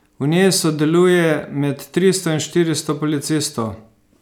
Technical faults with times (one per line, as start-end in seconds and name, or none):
none